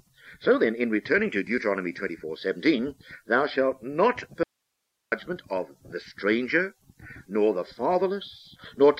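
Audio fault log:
4.43 to 5.12 s, audio dropout to a faint residue. The sound stops abruptly and about 0.69 s is lost. The gap is not silent. It holds only a low hiss, roughly 55 dB below the normal level. The hiss means the path after the break stayed live while the wanted signal was gone. The signal then returns just as suddenly. There is no fade at either edge, so it does not sound like a natural pause. The likely cause is a brief loss of the source feeding a still-open input.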